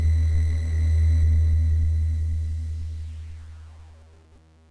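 No technical faults are audible anywhere in this recording.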